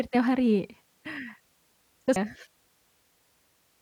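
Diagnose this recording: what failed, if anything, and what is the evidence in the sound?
What failed is at the codec stage: there's damaged data in the compressed stream right at 2.16 s, where a tiny glitch cuts across the speech for just a few milliseconds. The bytes feeding the decoder at that point were corrupted, so it couldn't read that frame properly, lost its place in the bitstream and had to hunt for the next valid frame header before playback carried on.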